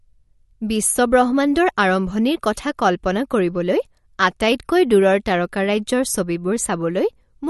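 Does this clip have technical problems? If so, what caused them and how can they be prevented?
Yes. Throughout the speech there is a watery, swirling texture, and nothing sounds above 11.8 kHz. This is likely MP3 compression: short of bits, the encoder dropped the treble and let weak frequency lines flicker between frames, which fits a low bitrate around 48 kbps. Unlike a simple low-pass filter, which only dulls the top, this flickering also makes the s sounds chirp. Encoding at a higher bitrate, or keeping an uncompressed copy, would prevent it.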